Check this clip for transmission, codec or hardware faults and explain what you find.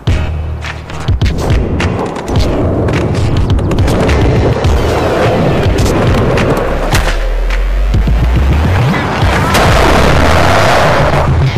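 Hard clipping runs through the whole clip. The signal is overdriven by about 18 dB, so roughly a fifth of samples are flattened. Every loud sound turns into harsh fuzz.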